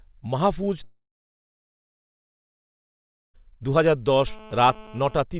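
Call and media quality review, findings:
Long network dropout, 0.84 to 3.40 s: audio stops for about 2.5 s, likely from the packet stream being lost in transit. Jitter buffer concealment stretches the last sound into a short fading buzz, then about 2.3 s of near-silence. Waveform shows a flat gap and spectrogram shows a blank band. Audio resumes without the lost part.

GSM phone buzz, 4.27 to 5.23 s: hard, raspy 217 Hz buzz at about 23 dB below the speech, nearly steady, consistent with a nearby 2G handset in a call. Its burst transmissions are rectified in the analogue audio front end. Spectrogram shows evenly stacked horizontal harmonic lines at 217 Hz spacing, cut off at 4 kHz by the G.711 path. Waveform shows a periodic pulse pattern.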